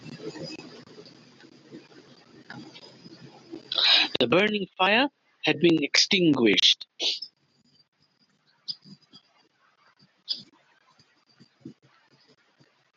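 No technical faults can be heard anywhere in this speech recording.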